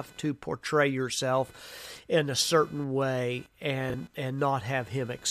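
It's a speech clip with computer activity noise running right through it, a faint buzzy chirp pulsing at roughly 500 Hz, around 30 dB under the voice, tracking the machine's load rather than the talking. Then at 3.90 to 3.94 s you get chunks out of order: a 20 ms chunk lands one slot late, so that moment sounds jumbled.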